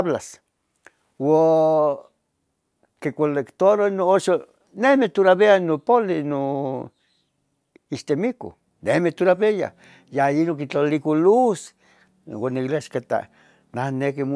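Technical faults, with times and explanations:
No technical faults can be heard in the signal at any point in the speech recording.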